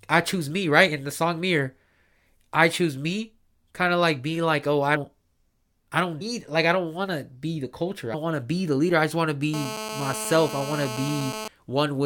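Three brief smeared blips break the speech, at 4.95 s, at 6.20 s between "I don't" and "like I don't want", and at 8.13 s between "to be the culture" and "want to be the". Each is a small forward jump rather than a click, losing roughly a tenth of a second of speech at the first and third and slightly less at the second. These are compressed frames skipped: a few whole frames, about 23 ms each, are never played, and the overlapping neighbours blur the seam.

From 9.54 s, right after "I just want to", a hard, raspy buzz sits under the speech until 11.48 s, steady throughout and only about 9 dB below the speech. It is GSM phone buzz. A nearby 2G phone on a call transmits in bursts 217 times a second, and the audio circuitry rectifies those radio pulses into a 217 Hz tone rich in harmonics that has nothing to do with the speech.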